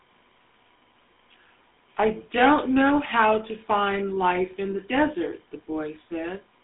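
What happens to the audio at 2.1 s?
At 2.1 s the speech sounds buzzy and gravelly, thin and band-limited to roughly 200 Hz to 3.6 kHz, with nothing above 3.8 kHz. The cause is the GSM full-rate codec, present throughout the clip. It models the vocal tract and drives it with sparse, regularly spaced pulses, which fits a 13 kbps rate.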